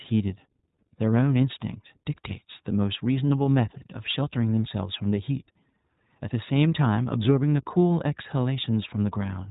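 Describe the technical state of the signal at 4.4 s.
At 4.4 s the speech is passing through the iLBC codec, as it does for the whole clip. This narrowband VoIP codec codes each short frame's excitation independently of the previous one; the roughness fits 20 ms frames at about 15.2 kbps. Nothing above roughly 3.8 kHz survives, so the speech sounds band-limited and telephone-like. The codec damage is plainly audible as a rough, slightly synthetic texture.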